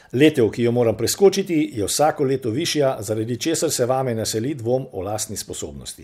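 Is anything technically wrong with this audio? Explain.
Yes, one brief problem. Right after "jo moram", from 1.24 to 1.27 s, there's hard clipping: peaks overshoot the ceiling by about 1 dB and get flattened, giving a quick crackle.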